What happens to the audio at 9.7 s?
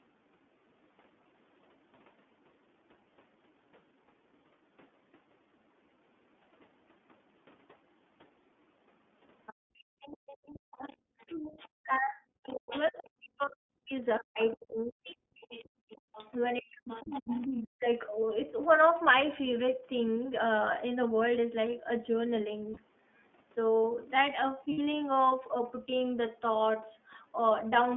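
At 9.7 s the echo canceller has clamped the microphone: background gated by the echo canceller from 9.54 to 10.01 s, the room sound dropping by up to about 40 dB for roughly half a second before returning. Across 9.46 to 11.35 s a faint second voice sits around 20 dB under the talker, most likely the other side's voice leaking through because the canceller failed to remove the loudspeaker's output. Throughout, the iLBC codec at 13.33 kbps in 30 ms frames limits the line to 200 Hz to 3.5 kHz, leaving a plainly audible rough, synthetic edge.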